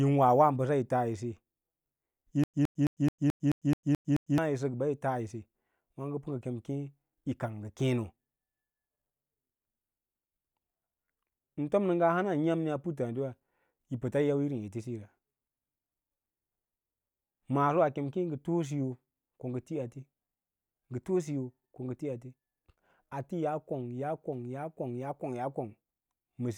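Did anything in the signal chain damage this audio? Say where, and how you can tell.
Yes: stutter with silent gaps from 2.44 to 4.38 s, likely a stalled playback buffer. A 115 ms burst repeats every 216 ms, showing as identical spectrogram blocks between blank strips.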